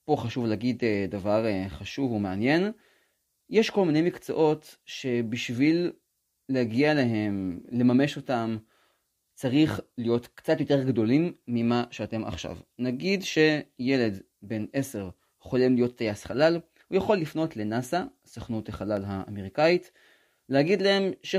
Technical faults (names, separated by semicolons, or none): dropped samples